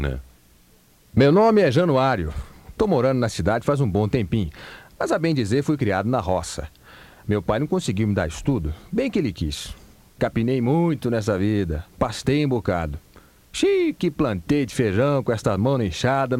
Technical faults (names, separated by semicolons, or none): none